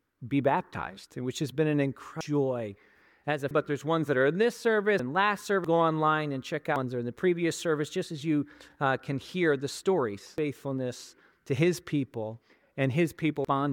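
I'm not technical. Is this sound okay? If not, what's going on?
No. The sound has compressed frames skipped: small chunks of the file, each about a tenth of a second, never play, so the sound jumps forward. This happens at 2.21, 3.51, 4.99, 5.64, 6.76, 10.38 and 13.45 s. The jumps skip roughly 0.7 s at the first three and at 10.38, about half a second at 5.64, and about 0.3 s at 6.76 and 13.45.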